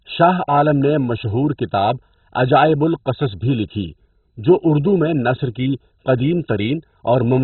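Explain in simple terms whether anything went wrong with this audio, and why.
The speech sounds dull and gurgly from start to finish, with a grainy, bubbling edge and nothing above about 4.1 kHz. The likely cause is heavy MP2 compression: starved of data, the encoder switched off the upper frequency bands and coarsely rounded the rest.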